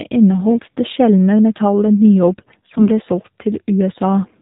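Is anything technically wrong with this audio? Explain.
Yes. Throughout, the AMR narrowband mobile codec, at a low rate that sounds like about 7.4 kbps, strips everything above 4 kHz and models the voice sparsely, leaving it muffled and plainly buzzy. AMR bit errors strike from 0.48 to 0.62 s, just before "det sjeldne metallet", and from 2.38 to 2.89 s, just after it. Flipped less protected frame bits misplace the excitation pulses and skew the pitch, gain and spectrum values, so the voice stays at its pitch and level but turns hoarse and gargly.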